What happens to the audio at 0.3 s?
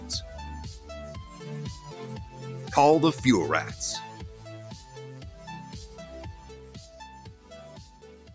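A noise suppressor built for speech is left running on this audio, and it is active at 0.3 s as it is for the whole clip. It mistakes sustained tones, ambience and decaying tails for background noise and pulls them down by roughly 10 dB, while sharper onsets slip through. Around 0.3 s, held sound sinks and swells unevenly, so the audio pumps and thins instead of sustaining smoothly.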